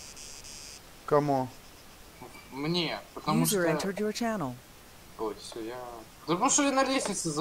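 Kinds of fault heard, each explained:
No faults can be heard anywhere in the clip.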